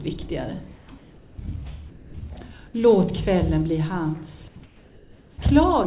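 From 0.76 to 0.88 s, 0.98 to 1.38 s and 4.66 to 5.38 s, the background, which sits about 26 to 29 dB below the loud parts, turns into a flat, featureless hiss that is about 2 to 3 dB quieter. This is comfort noise in place of the background: the sender likely stopped transmitting during the pauses, and the receiver filled them with synthetic noise that matches only the rough spectrum of the real background, so its texture disappears until the sound resumes.

From 1.9 to 2.14 s, the same steady noise covers about 90 ms of actual sound before the sound returns. This is sound dropped by the voice detector: it likely mistook that sound for background and muted transmission, and the receiver played comfort noise over it. Throughout, the audio has nothing above 4 kHz, which fits a G.711 mu-law call path.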